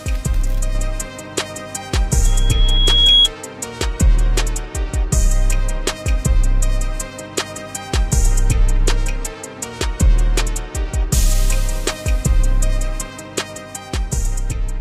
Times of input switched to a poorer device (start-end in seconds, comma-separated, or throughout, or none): none